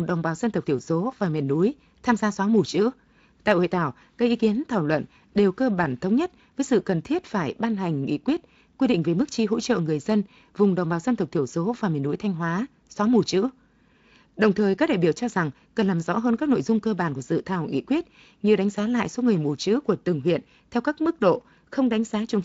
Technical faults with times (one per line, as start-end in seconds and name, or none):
none